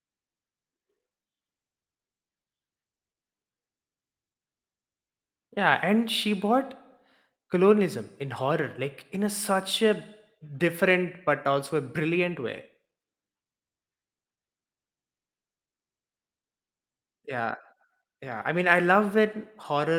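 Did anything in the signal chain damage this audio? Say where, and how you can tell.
No, nothing audible in this speech recording points to damage at any stage of the chain.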